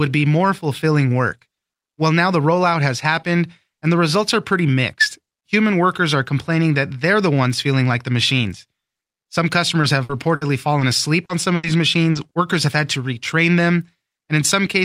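Short concealed packet loss at 9.81 to 9.85 s: about 20 ms of the call arrived too late for the decoder, and the receiver bridged the hole by extending the preceding sound before easing back into real audio, leaving a brief smear or wobble. A burst of packet loss follows at 10.03 to 10.11 s, where 60 ms went missing in a row; the receiver carried the last sound forward while turning it down, so it comes out as a held buzz or fading hiss, then resumes further on with that stretch gone. A second burst, also 60 ms, falls at 10.35 to 10.43 s. Further short concealed losses come at 10.79 to 10.83 s (20 ms) and 11.25 to 11.31 s (40 ms), each a quick wobble. A third burst at 11.55 to 11.65 s drops 80 ms, the longest fade in the clip. A final short concealed loss at 12.11 to 12.17 s smears another 40 ms.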